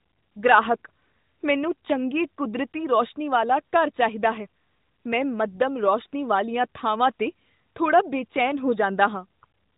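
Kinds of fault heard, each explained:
Nothing here stands out as a fault, so there's no kind to list for this speech clip.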